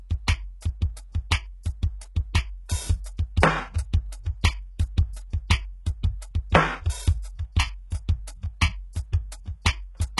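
Throughout the music, the treble sounds gritty and metallic, and nothing reaches above 11.5 kHz. The likely cause is HE-AAC compression: upper bands are rebuilt by copying lower ones upward, and the heavy damage fits a bitrate near 12 kbps.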